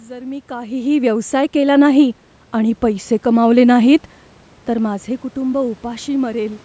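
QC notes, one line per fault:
0.47–4.09 s, automatic gain rising: just after "जर मी" the level climbs steadily by about 8 dB over more than three seconds as the gain control, judging the input too quiet, keeps turning itself up. What separates this from a talker leaning in is that the room noise swells along with the voice, rising in step between phrases, because the gain acts on everything reaching the microphone rather than on the voice alone.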